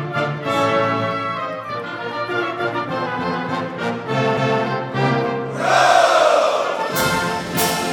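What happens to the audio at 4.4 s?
A CD skip hits at 4.37 s: the laser lurches to another turn of the spiral, the output drops out for a few milliseconds, and playback resumes elsewhere. It sounds like a sharp tick plus an abrupt jump, showing as a thin broadband vertical stripe and a waveform discontinuity.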